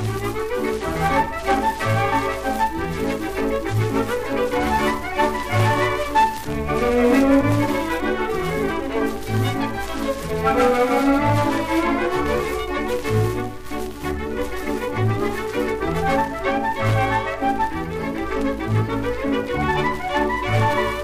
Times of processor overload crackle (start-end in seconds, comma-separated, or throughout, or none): none